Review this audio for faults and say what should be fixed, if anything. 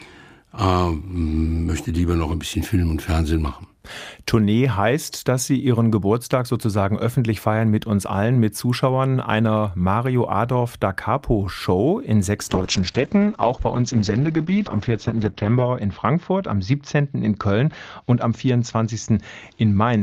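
A call bitrate drop starts at 12.51 s and lasts to the end of the clip. The sound turns coarse and smeared. The top end collapses from about 20 kHz down to a 6 kHz cut-off, so it goes muffled. The worst stretch holds for about 3.2 s. This fits the encoder being pushed from roughly 48 kbps to about 8 kbps after the bandwidth estimate fell. To prevent it, stabilise the network path and set a higher minimum bitrate for the encoder.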